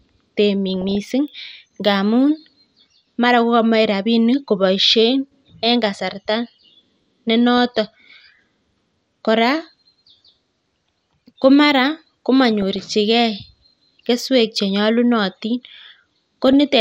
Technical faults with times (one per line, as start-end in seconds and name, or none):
0.00-16.81 MP2 compression
0.69-0.95 DAB burbling
5.35-5.50 DAB burbling
7.57-7.72 DAB burbling
12.62-12.82 DAB burbling
16.48-16.53 DAB burbling